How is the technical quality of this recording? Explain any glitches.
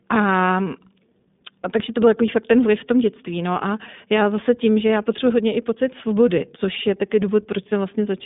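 The quality is limited throughout by iLBC codec damage. Speech is confined to a telephone band of 150 Hz to 3.6 kHz, with nothing above 3.7 kHz. Each 20 ms frame is coded on its own, giving a plainly rough, synthetic edge that fits a 15.2 kbps rate.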